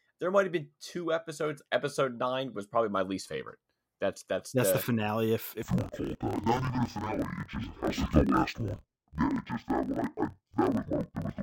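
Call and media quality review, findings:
Interleaved audio read as planar, 5.63 s to end of clip. Speech drops an octave, sounds doubled and choppy, at a 38.3 Hz block rate. Likely deinterleave step in decoder or mixer: each 26.12 ms block split into halves, both played at half speed.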